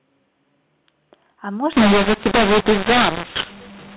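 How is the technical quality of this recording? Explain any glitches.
Telephone-band G.711 A-law speech breaks down from 1.72 s to the end with a mu-law and A-law mix-up. A-law bytes are decoded as mu-law, scrambling sample levels. The result is harsh, gritty distortion with hiss filling the pauses. Unlike clipping, it corrupts quiet moments as well as loud ones.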